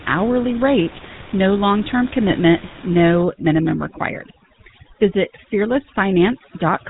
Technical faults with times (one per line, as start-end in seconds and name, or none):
0.00-6.89 GSM full-rate codec
2.30-2.43 GSM bit errors
3.23-6.89 overdone noise removal